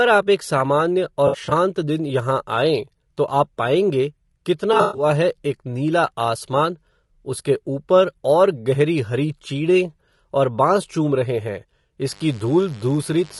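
Low-delay AAC compression runs through the whole speech clip. The roughness and grain point to AAC-ELD at around 32 kbps, likely the codec of a video-call link. Its short frames, about 20 ms long, cannot separate the voice's pitch harmonics cleanly, and at this bitrate too few bits remain. Noise fills the gaps between harmonics, and the top band sounds thinned and synthetic. The damage is plainly audible throughout.

AAC frame loss with concealment occurs first from 1.27 to 1.52 s, between "आप एक सामान्य" and "दिन यहाँ आएँ तो". About 120 ms of frames drop out across a 240 ms stretch, and the longest gap is around 70 ms. The decoder patches each hole from the last good spectrum, so the speech there turns smeared, noisy and phasey. A second loss runs from 4.73 to 5.05 s, just before "है एक नीला". Here 180 ms goes missing within 240 ms, with a longest run of roughly 100 ms.

Mains buzz enters at 12.07 s, right after "चूम रहे हैं", and continues to the end. 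Something in the chain, such as a dimmer, a rectifier or a missing shield, lets sharp switching spikes through twice in every 50 Hz cycle. Their harmonics stack up into the kilohertz range. The result is a steady, raspy buzz sitting about 30 dB below the speech.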